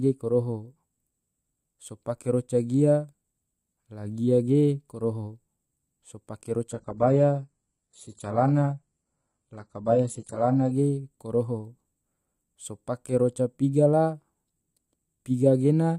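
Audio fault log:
6.72 to 10.72 s, adaptive stream at a lower bitrate: the speech abruptly loses its top end, with nothing above about 11.1 kHz, and high frequencies take on a synthetic, replicated quality as codec artefacts increase. There is no gap at either switch. The four-second stretch fits a slowed connection pushing the player onto a low-rate HE-AAC rendition near 12 kbit/s, rebuilding treble by spectral band replication, before it returns to an AAC-LC stream near 96 kbit/s.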